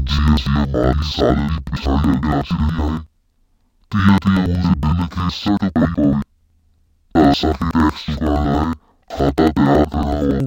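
Speech throughout sounds an octave low, doubled and choppy at about 10.8 Hz: interleaved audio read as planar, splitting each 93 ms block (fitting 4096 samples) into slowed halves.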